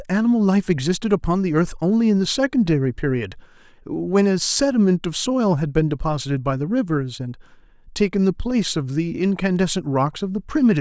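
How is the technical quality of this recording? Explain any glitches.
Listening closely, nothing in the recording stood out as a technical problem or glitch.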